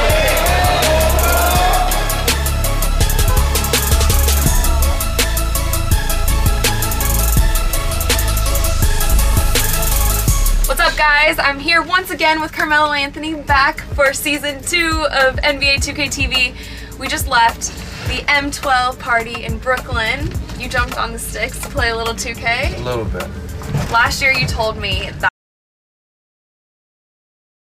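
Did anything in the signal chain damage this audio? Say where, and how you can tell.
Yes. The input feed was likely lost, through a disconnected device, failed link or mute, while the recorder kept writing silence. At 25.29 s the sound cuts off mid-flow into an audio dropout to silence that runs to the end, with no room tone left.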